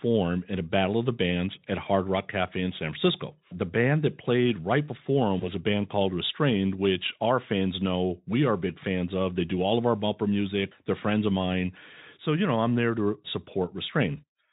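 At 5.39 s, just after "played right before them", VoIP packet loss concealed by the speech codec is heard. The gap points to a single lost 20 ms frame. The decoder fills it by extending the previous sound, which fades into a brief buzzy or noisy smear. The Speex decoder takes until about 5.49 s to recover, before "a band called".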